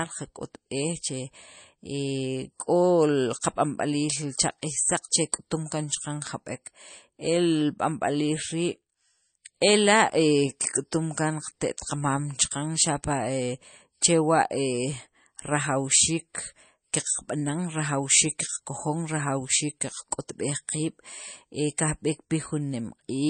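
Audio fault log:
Throughout, MP3 compression: nothing in the speech reaches above 9 kHz, and the coding damage is plainly audible as a watery, swirling texture with smeared attacks. This is likely the work of an MP3 encoder starved of bits, consistent with a rate around 32 kbps, which cuts the treble at a fixed frequency and drops weak spectral lines that then flicker in and out from one frame to the next.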